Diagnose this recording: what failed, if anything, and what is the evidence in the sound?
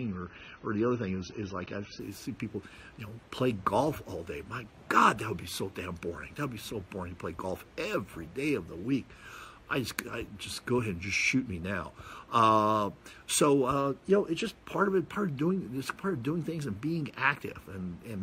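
What failed is at the playback and network end: an adaptive stream starting at a low bitrate. For the first 2.0 s the sound has nothing above 6.3 kHz, so the top end is just gone and the codec artefacts are thicker. At 2.0 s the quality jumps up with no gap. The player probably opened on a cheap rendition to start fast and switched once it had gauged the connection. The dull start fits an AAC stream at around 24 kbit/s, and the improvement fits a step up to something like 96 kbit/s.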